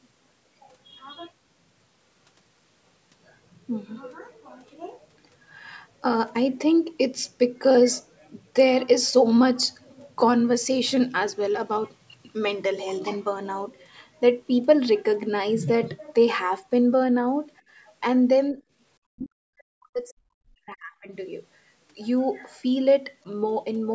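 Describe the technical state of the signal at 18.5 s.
From 18.52 to 18.62 s the speech dips by roughly 10 dB for about a tenth of a second, likely speech suppressed in double talk, where an echo canceller ducks the near talker while the far side speaks. Unlike a packet dropout, the level sags rather than falling to silence.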